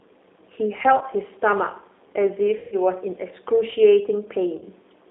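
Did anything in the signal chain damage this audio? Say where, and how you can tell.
Yes. At the codec stage, a G.729 codec at 8 kbit/s confines the speech to about 300 Hz to 3.7 kHz throughout, leaving it rough, thin and plainly synthetic.

On the network, VoIP packet loss concealed by the speech codec appears at 0.98–1.04 s, 2.57–2.76 s and 4.58–4.65 s. The decoder stretches its last frame into a fading buzz or coloured noise. The middle gap, about 150 ms, fits several lost packets.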